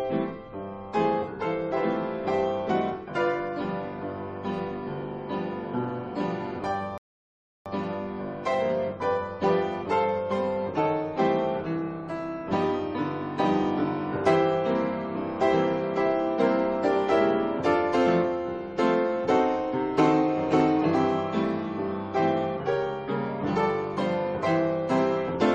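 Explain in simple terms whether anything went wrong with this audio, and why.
At 6.98 seconds the sound stops dead and goes silent. It picks up again at 7.66 seconds, right where it left off. This is a rebuffering stall. The player ran out of downloaded audio and waited for more. Nothing was skipped, but about 0.68 seconds of silence was added.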